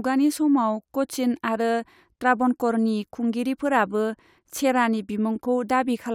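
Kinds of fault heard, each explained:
No technical faults can be heard in the speech; the signal stays continuous and steady in level throughout.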